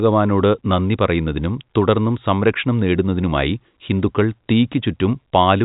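Nothing in this speech recording is technically wrong: it carries the band limit of G.711 telephone coding, with no content above about 3.8 kHz, and any coding damage is faint at most.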